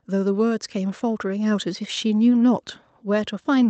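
From 0.05 s to 1.75 s the automatic gain control, having judged the incoming speech too quiet, keeps raising its gain step by step, adding about 5 dB over roughly 1.7 seconds. Because the gain is applied to the whole signal, the voice and the background noise swell upward together rather than the speech alone getting louder, giving a slow creeping lift in level. The top end stays limited to around 8 kHz throughout, consistent with the Opus call path it passed through.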